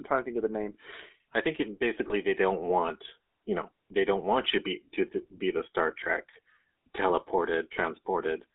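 A speech recording, heard through the GSM full-rate codec for its whole length. The voice has a buzzy, gravelly texture. That comes from the codec rebuilding speech from a vocal-tract model fed by a sparse, regularly spaced pulse excitation. The damage is plainly audible. The band runs from about 250 Hz to 3.6 kHz, so the top and bottom are gone. That sound fits a 13 kbps GSM full-rate channel.

Lost GSM frames occur twice, at 2.08 to 2.14 s and at 6.04 to 6.10 s. Each gap matches a single dropped 20 ms frame. The decoder repeats the last good frame's settings. So the sound briefly freezes into a rough, metallic ring instead of cutting out.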